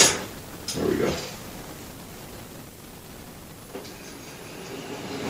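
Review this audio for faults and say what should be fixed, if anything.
Nothing stood out on listening, so there is nothing here that needs fixing.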